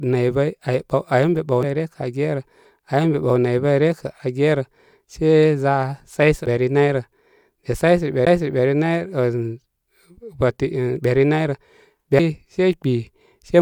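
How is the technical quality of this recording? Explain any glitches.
The recording has four short glitches of two kinds.

Damaged data in a compressed stream, at 1.63 s and 6.46 s: corrupted bytes leave the decoder unable to parse those frames, so it loses sync and skips ahead to the next frame header. Each event is a brief chirp or blip in the speech.

CD skips, at 8.25 s and 12.19 s: a knock or flaw throws the laser onto a different turn of the disc's spiral. The player mutes for about 10 ms at the first and a few milliseconds at the second, heard as a tick, then resumes elsewhere in the speech.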